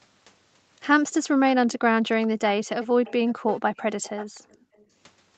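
Background gated by the echo canceller first appears from 1.77 to 1.95 s: while the far-end loudspeaker played, the canceller clamped the microphone, and the room tone falls away by about 40 dB for roughly a fifth of a second before returning.

An echo leak runs from 2.83 to 4.85 s. A delayed copy of the speech trails the original by 476 ms at about 15 dB below it, likely because the other side's canceller failed to remove its loudspeaker sound from its microphone. Within this stretch the gating recurs, dropping the background by about 29 dB from 2.87 to 3.0 s and about 30 dB from 4.41 to 4.75 s.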